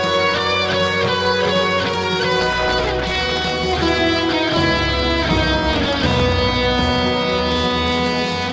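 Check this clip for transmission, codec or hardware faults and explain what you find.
One fault is present: a processor overload crackle from 2.41 to 3.5 s. The processor could not finish its audio buffers on time, and it missed many deadlines in a row. The buffers appear very short, under a millisecond each. At each miss, a fragment of old audio was replayed with hard edges. Around a hundred such misses close together make a gritty, tearing crackle over the sound. It stops when the load eases. The audio carries nothing above 8 kHz, which fits a wideband call codec such as G.722.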